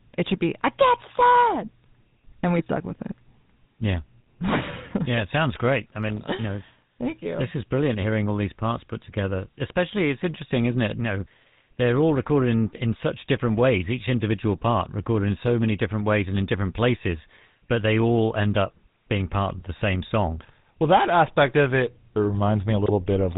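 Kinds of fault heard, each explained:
GSM full-rate codec: Throughout the speech there is a buzzy, gravelly roughness. The sound is band-limited to below 4 kHz, which fits the original 13 kbps GSM coder. It models the vocal tract and drives it with a sparse train of regularly spaced pulses, keeping only every third sample of the excitation. Ordinary low-bitrate coding tends to sound smeared or watery. Here the grain is a steady rasp, and it never drops out.
GSM bit errors: From 22.81 to 22.91 s, near the very end, the speech briefly breaks into a squawking, gargling burst. Corrupted values reach the decoder. A wrong filter setting bends the spectrum, and a wrong pitch or gain value makes the level jump, so the sound turns harsh and distorted instead of going silent. The burst spans a handful of decoded frames, which fits a bit error rate of around half a percent. A packet loss gap or a digital click would not produce this brief tonal garble.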